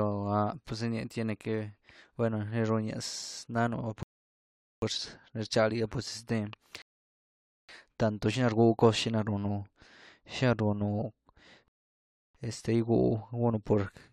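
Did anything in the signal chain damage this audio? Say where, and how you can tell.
Yes. The speech stops dead three times during playback, in rebuffering stalls at 4.03–4.82 s, 6.82–7.69 s and 11.68–12.35 s, adding about 0.79, 0.87 and 0.67 s of silence. The player drained its downloaded audio and waited for more before continuing. Unlike a network dropout or concealed packet loss, no speech is missing and nothing is smeared: each gap is clean silence, and the speech resumes at exactly the point where it stopped.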